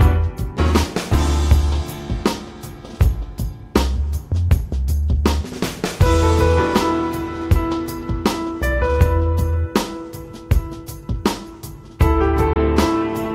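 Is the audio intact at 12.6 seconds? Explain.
No, not quite. There's a gap between stream segments from 12.53 to 12.56 s, just before that point. Two segments' time stamps don't meet, so the player drops in about 27 ms of silence, a hard-edged hole. Nothing is lost; the sound just resumes slightly late.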